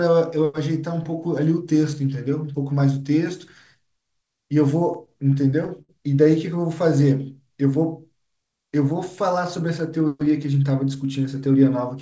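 From 4.94 to 5.91 s the speech drags and stutters through about nine held moments, the longest 68 ms. These are repeated stalls (stutter): late packets kept emptying the jitter buffer.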